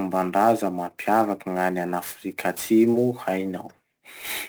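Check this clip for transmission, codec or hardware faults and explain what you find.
Two things stand out: a hardware clocking problem that runs the whole way through, and one brief dropout in transmission.

Sample clock jitter is present from start to finish. The converter's clock wanders by something on the order of ten microseconds, so each sample lands a touch early or late. Where the waveform moves fastest, that timing slop turns into amplitude error, sitting roughly 20 dB under the speech. You hear it as a grainy hiss riding on louder and brighter syllables, dropping away in the pauses.

There's a short concealed packet loss between 2.91 and 2.95 s. About 20 ms of audio never arrived, and the receiver patched roughly 17 ms of it by carrying the previous sound forward, extending the pitch if it was voiced or shaping noise if not, before crossfading back into real audio. It comes across as a quick smear or wobble, and a short consonant right there could get swallowed.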